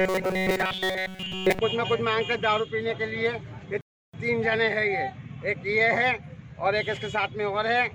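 Robotic sound from repeated short buffers runs from 0.01 to 1.59 s: a rigid metallic buzz at 188 Hz, likely from the player repeating a roughly 5 ms buffer instead of playing fresh audio. A rebuffering stall from 3.81 to 4.14 s drops the audio to silence for 325 ms while playback waits for more data, then resumes exactly where it stopped.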